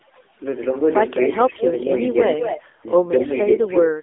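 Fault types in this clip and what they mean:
overdone noise removal: The background drops away with twinkling specks, as a noise reducer set too strong cut bands near its noise estimate.
AMR narrowband mobile codec: The speech is buzzy and synthetic with nothing above about 3.7 kHz, from the narrowband mobile speech codec at a low rate that fits roughly 8 kbps AMR-NB.
echo leak: A delayed copy of the speech trails about 224 ms behind, from a little quieter to much fainter, likely the far end's echo canceller letting loudspeaker pickup return.
speech suppressed in double talk: The speech dips briefly around 1.7, 2.6 and 3.7 s, by up to about 20 dB, likely an echo canceller turning both talkers down during overlap.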